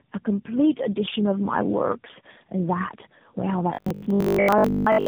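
From the start the speech sounds rough, muffled and warbly. This is tandem speech coding. The call appears to have crossed four separate speech codecs in a row, in a chain that ends in AMR-NB, and it was decoded and re-encoded at each border. Every coder compressed the previous one's already damaged output, so the losses stacked up into a harsher, duller sound than any single link would give.

From 3.74 s to 5.06 s the speech turns into a rigid, metallic buzz that still loosely follows the syllables. This is robotic sound from repeated short buffers. The buzz sits at 50 Hz, which fits a repeated chunk about 20 ms long. The likely cause is that new audio arrived too rarely, so playback kept repeating the last short chunk and skipped the real signal. That repetition fills most of this stretch.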